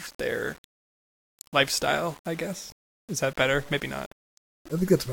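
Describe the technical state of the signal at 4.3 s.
At 4.3 s, as throughout the clip, the speech sounds grainy and gritty in its quieter parts, likely low bit depth without dither: rounding to 7 bits leaves error tracking the signal, roughly 25 dB down.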